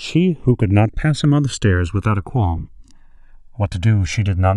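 Throughout the speech, the channels drift apart: separate clocks, roughly 300 ppm out, let the inter-channel delay creep to about 1.5 ms, so mono sums flange slowly, unlike fixed comb filtering. From 2.56 to 2.68 s, lost LE Audio frames scatter short gaps, none longer than about 15 ms, which fits roughly nine dropped frames; the decoder's noisy smear replaces tone, rather than clean silence.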